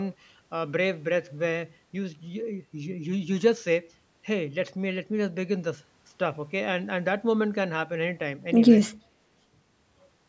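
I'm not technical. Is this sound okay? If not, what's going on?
Yes, the sound is fine; nothing is wrong with it.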